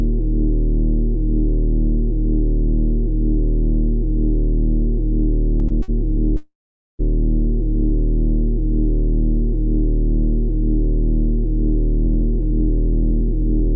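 At 5.68 s the first short stall from a late packet occurs. A packet missed its slot and the jitter buffer ran dry. The receiver stretched the last sound for about 21 ms, then resumed at the same point. A second stall follows at 5.82 to 5.91 s, held for 58 ms. Nothing is lost. Each moment simply lingers, with a faint buzz or a small dip in level.

From 6.37 to 7.02 s the audio goes through a call audio freeze. The sound stops moving forward for 621 ms. First the last fragment carries on as a fading buzz. Then about 460 ms of near silence follows. Packets were likely held up in transit, emptying the buffer. When they arrive, the audio picks up where it stopped. A gap has been inserted, not content removed.

From 12.06 s to the end comes a jitter buffer speed-up. The buffer was holding more audio than it wants. To shrink that delay, the receiver cuts out tiny pitch-length slices, one after another. 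Roughly a twentieth of a second disappears over this stretch. Playback runs at 103% speed with unchanged pitch, just under the point where it would sound hurried. Throughout, the call path tops out at 8 kHz, which fits G.722 at 64 kbps.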